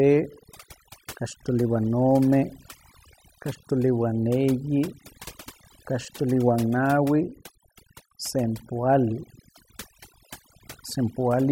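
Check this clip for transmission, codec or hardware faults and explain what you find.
One fault runs through the whole speech clip: overdone noise removal. A noise suppressor set far too aggressively cuts any frequency band that drops near its noise estimate, taking the quieter parts of the voice with it. The background drops and breaks up into twinkling specks.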